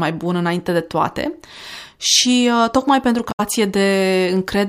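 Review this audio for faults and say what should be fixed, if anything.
Damaged data in a compressed stream at 3.28 to 3.40 s, just after "tocmai pentru": a stretch of the compressed speech arrived corrupted, so the decoder could not make sense of those frames, dropped out of sync and hunted forward for the next valid frame header. For about 0.12 s the speech is disrupted until decoding resumes. Prevent it by verifying the file or stream with checksums and re-fetching or re-encoding from an intact source.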